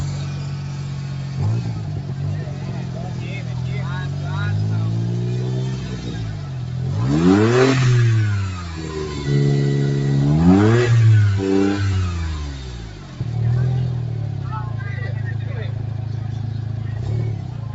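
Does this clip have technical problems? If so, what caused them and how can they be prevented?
Yes. Throughout, a noise suppressor applied to music or sounds mistakes sustains for noise and dips them by roughly 5 dB, so spectrograms show tails fading after each bright attack. Turn off speech-oriented noise suppression, or use a music mode, when sending non-speech audio through a call.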